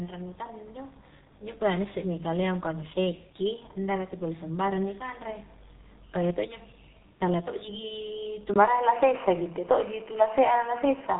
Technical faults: G.723.1 codec

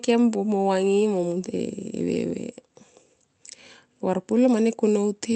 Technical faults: none

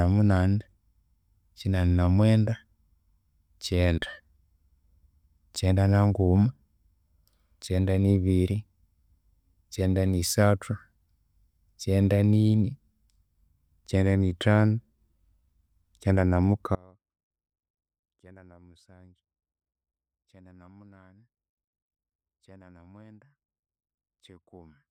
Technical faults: audio dropout to a faint residue

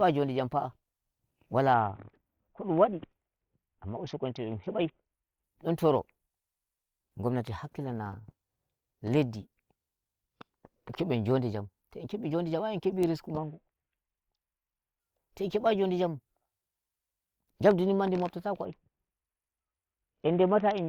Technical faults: Bluetooth SBC bit pool drop; loud pop

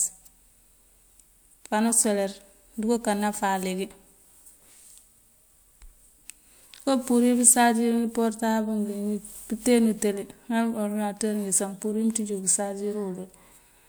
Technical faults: none

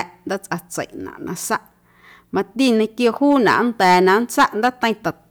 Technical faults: hard clipping

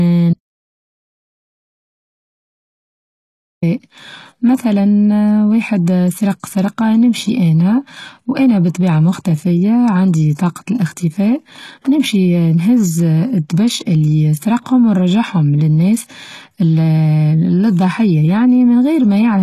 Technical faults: HE-AAC compression; audio dropout to silence

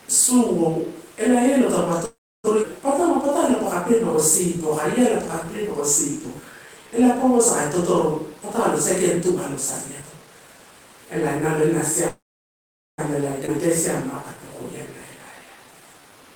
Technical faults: call audio freeze; skip ahead; jitter buffer slow-down; jitter buffer speed-up

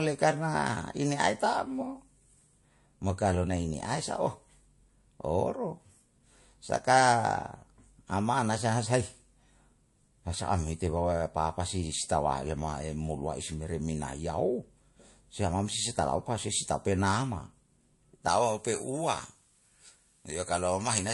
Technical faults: low-bitrate audio saved at a high bitrate; pre-emphasis left on

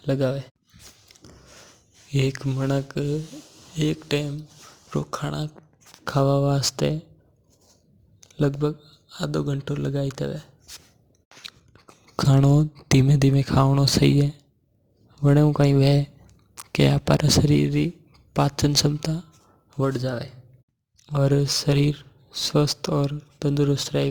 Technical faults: crude rate conversion

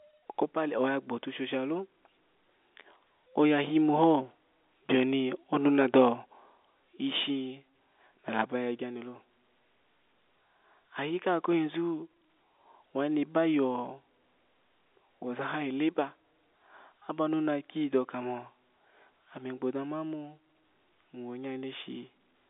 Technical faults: none

